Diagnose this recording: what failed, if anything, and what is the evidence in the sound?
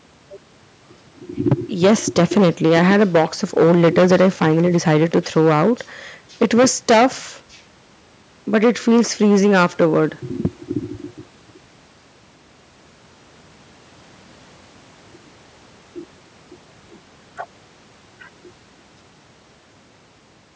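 Hard clipping from 1.46 to 5.72 s, 6.42 to 7.06 s, 8.54 to 10.06 s and at 10.45 s. The speech peaks are driven about 15, 14, 10 and 7 dB past full scale at the converter and cut flat, producing harsh fuzz from high harmonics.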